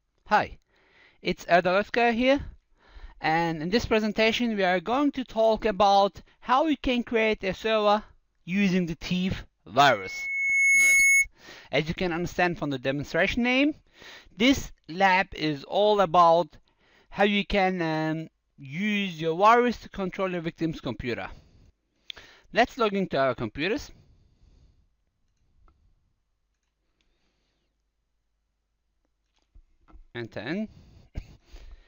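Loudspeaker feedback squeal from 9.87 to 11.26 s: a single 2.2 kHz tone swells over about a second to roughly 5 dB above the audio. A steady interfering whine would not grow like this.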